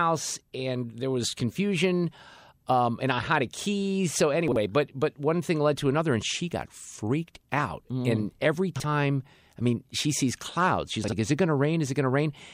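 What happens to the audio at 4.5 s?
At 4.48 to 4.56 s, just before "but but one thing", the speech has chunks out of order: one 40 ms chunk plays one chunk late, swapping places with its neighbour. The result is a brief jumbled stutter, seen as waveform discontinuities and thin vertical broadband streaks at the three joins.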